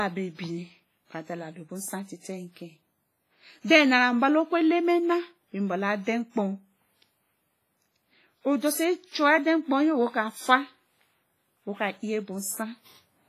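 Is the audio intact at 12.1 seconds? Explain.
No. At 12.1 s the speech carries the same damage heard throughout the clip, likely WMA compression. Long transform blocks smear quantisation noise, giving a ringing, washy sound and a hiss that breathes with the signal. Nothing sounds above 15.4 kHz. The heavy damage points to a low bitrate, around 24 kbps.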